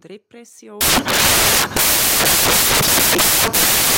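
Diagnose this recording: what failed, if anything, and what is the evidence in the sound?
The failure's in the sample-format conversion: from about 0.81 s right through to the end, the audio turns into loud, harsh broadband noise, which is the classic sound of samples built from the wrong bytes. The reader is stitching each sample's bytes together wrongly, off by a byte or in swapped order, so the jittery low bits end up as the big part of every value.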